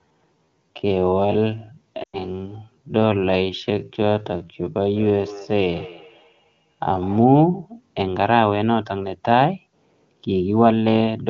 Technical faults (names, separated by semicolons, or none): time-stretched section; lost AMR speech frames; feedback echo between two devices